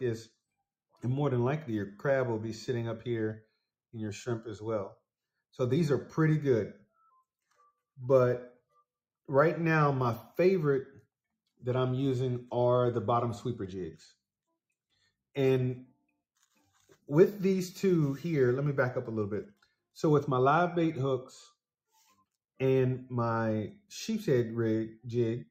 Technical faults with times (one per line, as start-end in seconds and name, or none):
none